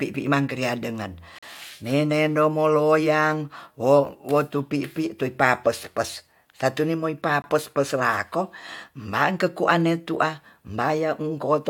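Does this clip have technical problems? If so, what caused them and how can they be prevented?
Yes. This speech has two gaps between stream segments: a 40 ms hole from 1.39 to 1.43 s, between "mangkria dengen" and "menendom moloyang wo wotupipi", and a 20 ms hole from 7.42 to 7.44 s. At each 6-second segment boundary, the timestamps leave a small gap that the player fills with silence. Unlike a dropout, no sound is missing, and the speech resumes exactly where it stopped. Packaging segments with continuous, exactly aligned timestamps prevents this.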